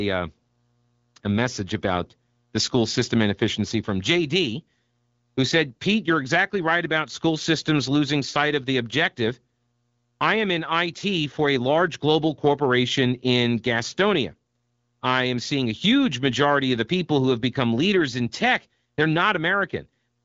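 No technical faults can be heard in this speech. It passes through the AMR wideband (HD Voice) codec at 12.65 kbit/s, which leaves only a light coding texture and no content above 7.4 kHz.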